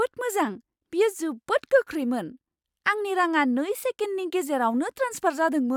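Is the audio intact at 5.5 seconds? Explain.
Yes, at 5.5 seconds the speech plays through intact, with no dropout, click, distortion or other fault at that moment.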